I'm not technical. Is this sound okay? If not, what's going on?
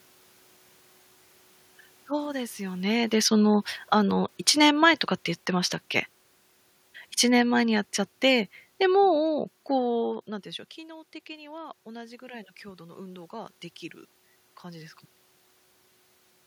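No. From 2.82 to 5.84 s, and again from 7.26 to 10.15 s, there is automatic gain falling: the recorder decides the input is too loud and steadily turns itself down, so the voice and the room noise behind it sink together over a few seconds. The first drop follows the talker moving, around 2.5 s.

From 10.74 to 13.61 s there is automatic gain rising. The voice has become much quieter at the microphone, so the recorder slowly turns itself back up, and the voice and background noise swell together over nearly three seconds instead of the level simply staying put.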